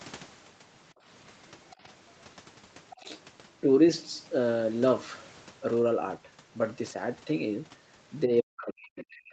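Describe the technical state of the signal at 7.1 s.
At 7.1 s the speech is intact, with no dropout, glitch or distortion, only the ordinary top end of a call line that stops at about 8 kHz.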